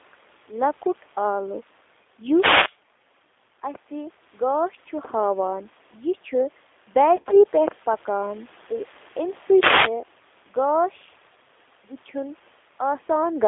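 Throughout the clip, gain pumping is audible, likely from input gain set far too high with a fast limiter clamping each loud syllable. The gain swings by around 10 dB, flattening loud and soft passages into a squashed level.

The whole clip also passes through the G.729 codec at 8 kbit/s, which models speech with a vocal tract filter, a pitch predictor and sparse pulses. Only about 300 Hz to 3.6 kHz survives, and the voice sounds plainly rough and synthetic.

From 7.16 to 7.44 s, VoIP packet loss concealed by the speech codec breaks up the speech. About 90 ms of audio went missing across a 160 ms stretch, in gaps of up to 30 ms. The decoder filled each gap by repeating its last pitch and filter at falling gain, which produces short buzzy, smeared patches. Because each frame builds on the previous one, the voice stays weak or distorted briefly after the losses end.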